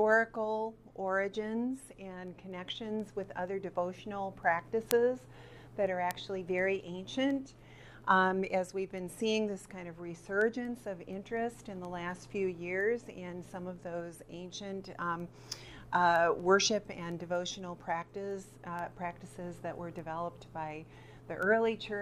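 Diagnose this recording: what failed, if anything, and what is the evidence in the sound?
Word clock ticks at the digital interface between converters: sharp clicks about every 0.2 s, around a hundred of them, from 0.13 s to 21.9 s. The receiver's clock drifts about 100 ppm from the sender's, so one sample is dropped or repeated at each slip. A spectrogram shows evenly spaced thin vertical broadband lines, and the waveform shows single-sample steps.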